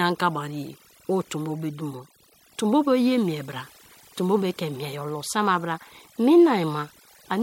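A speech recording with overdone noise removal throughout: the background drops and breaks up into twinkling specks, and quiet bands of the voice get gated away.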